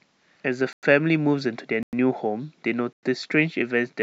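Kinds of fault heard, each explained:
Gap between chunks: at 0.73–0.83 s, 1.83–1.93 s and 2.93–3.03 s the speech breaks into 100 ms holes of hard-edged silence, one per 1.0 s chunk, because silence is left at each join; nothing is lost, only interrupted.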